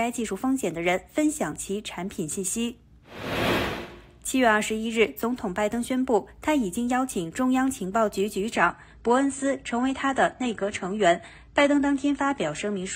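At 8.55 s the sound switches abruptly, with no gap, to an adaptive stream at a lower bitrate and stays there to the end. The top end is cut off above 9.1 kHz, and coding artefacts increase. This points to a step down from about 96 kbit/s to 24 kbit/s AAC.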